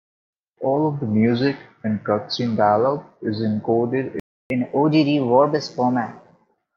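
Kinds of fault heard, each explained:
Playback stall: at 4.20 s the speech cuts out mid-flow and the output stays silent until 4.50 s, a gap of about 0.31 s. That break is most likely the player running short of buffered data, or its audio thread being held up, so nothing reached the output until it recovered. When sound returns it carries on from the point where it stopped rather than skipping ahead, leaving a clean hole in the flow of speech.
Catch-up at higher speed: from 4.50 s to 6.54 s, right after the stall, the speech runs fast at 1.15 times normal speed, with the pitch raised by roughly two semitones. The player is resampling the backlog that built up during the silence, so tempo and pitch climb together, giving a slightly hurried, chipmunk-tinged quality. By 6.54 s the lost time has been made up and both drop back to their normal rate.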